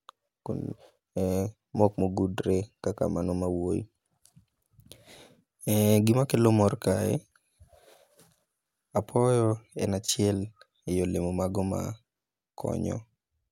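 No technical faults can be heard anywhere in this recording.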